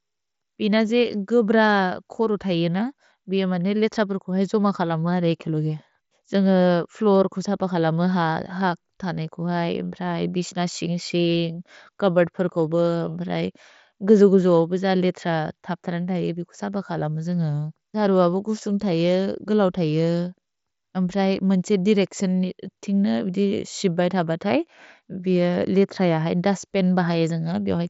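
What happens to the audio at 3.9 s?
Nothing goes wrong at 3.9 s: the speech runs through intact, carried by the Bluetooth mSBC headset codec with its band limit near 7.7 kHz.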